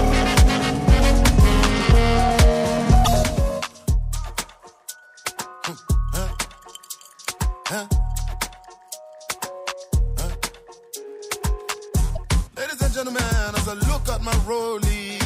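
Damaged data in the compressed stream causes brief glitches at 3.04 to 3.08 s and again at 12.13 to 12.17 s. Corrupted bytes leave the decoder unable to parse those frames, so it loses sync, heard as a chirp, click or short hole, while it resynchronises on the next valid frame header. From 3.23 s to the end of the audio, the level of the centred material falls abruptly by about 6 dB. This is most likely one channel dropping out, so that the mono sum carries only half of the content common to both channels.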